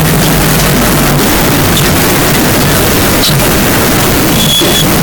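Float read as integer throughout this speech clip: the waveform sits near-square at an almost fixed, high level, noise matching speech, likely from 32-bit float samples read as 32-bit integers.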